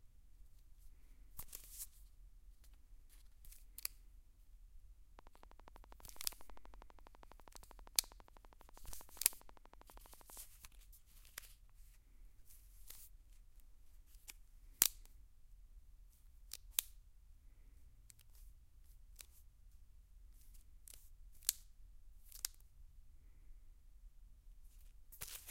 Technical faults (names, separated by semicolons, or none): train of clicks